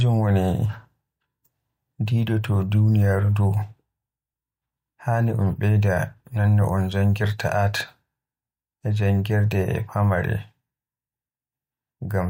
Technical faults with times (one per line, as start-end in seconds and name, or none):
none